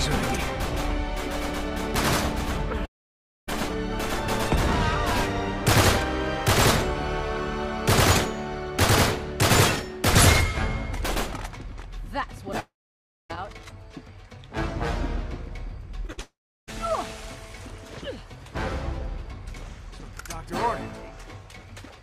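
At 2.85 to 3.49 s and again at 12.60 to 13.31 s the sound smears on briefly, then drops to about 0.6 s of silence before resuming further along. That's likely a long network dropout, with a chunk of audio simply gone. Around 16 s things get rough: a short concealed packet loss at 16.07 to 16.10 s leaves a quick smear, then a burst of packet loss at 16.12 to 16.19 s turns the sound into a held buzz or fading hiss. A third likely long network dropout runs from 16.21 to 16.69 s, with about 0.35 s of silence.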